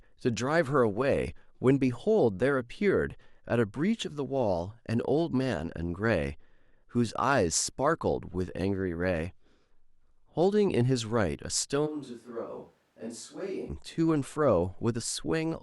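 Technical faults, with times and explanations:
11.88–13.68 s, switch to a distant microphone: the speech abruptly turns roomy and hollow, with thinner low end, and drops about 10 dB, while a faint background noise floor rises to roughly 35 dB below the speech. This is likely the close microphone cutting out and a farther one carrying the sound. On the waveform the envelope shrinks suddenly at the start and grows back suddenly at the end. On a spectrogram the low bands thin, reverberant smearing blurs syllable edges, and a diffuse noise haze fills the gaps.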